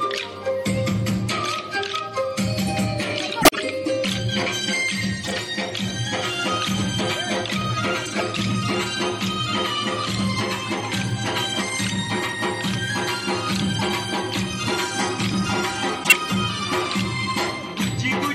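Five short bursts of corrupt frame decoded appear, at 3.42–3.59 s, 5.23–5.35 s, 8.05–8.21 s, 13.74–13.89 s and 16.04–16.14 s. Each spans a handful of damaged compressed frames that the decoder played despite bit errors, so misread gains and codes drop energy into the wrong frequency bands. They sound like chirps or noise blips lasting 0.1 to 0.18 s. The bursts at 3.42 s and 16.04 s are the loudest, peaking near -5 dBFS.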